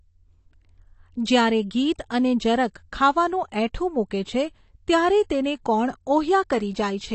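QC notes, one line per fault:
Throughout, AAC compression: dull, smeared speech with plainly audible codec damage; the spectrogram shows a hard ceiling at 8.5 kHz, likely from AAC-LC around 32 kbps.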